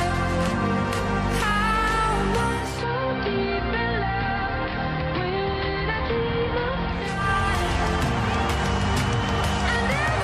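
At 2.42 s the receiver loses digital and blends over 440 ms to the AM analogue broadcast, returning at 7.33 s. Treble narrows, level drops about 2 dB and hiss sits roughly 30 dB down. A spectrogram shows the top band vanishing; the waveform shrinks slightly.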